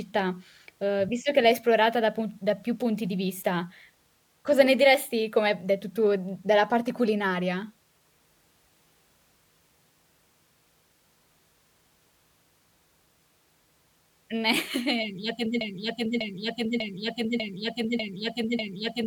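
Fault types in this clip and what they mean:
Broken-record loop: From 15.61 s the speech stops moving forward. One fragment, about 0.60 s long, plays again and again with no gap. It repeats six times and runs to the end of the clip. Each pass is identical. The speech that belonged in those last seconds never arrives. The player, encoder or stream likely stalled and kept sending the last piece it held.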